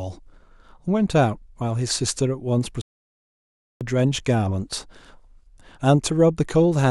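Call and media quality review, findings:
Playback stall, 2.81–3.81 s. Speech cuts out mid-flow into full silence for about 1.0 s, then resumes. Probable component: player output path. Likely cause is buffer underrun or a blocked playback thread, so no samples reach the output until data or scheduling recovers. Gap is clean, not a fade. Check jitter buffer depth and thread priority.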